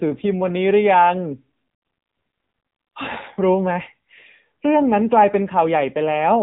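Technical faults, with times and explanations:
Throughout, AMR narrowband mobile codec: the speech sounds thin, boxed-in and plainly buzzy, with nothing above 3.8 kHz. The voice is resynthesised from a coarse vocal-tract model at a low bit budget, which fits the 7.95 kbps AMR-NB mode.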